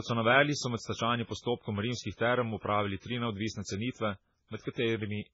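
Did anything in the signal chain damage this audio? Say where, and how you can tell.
Yes. The damage sits at the codec stage and runs through the whole speech clip. Nothing is present above 7.6 kHz, a hard treble ceiling, and the heavy artefacts throughout sound watery and swirly. This is likely MP3 compression at a very low bitrate, consistent with about 16 kbps. With so few bits, the encoder drops weak frequency lines that flicker on and off from frame to frame, and it discards the top band entirely.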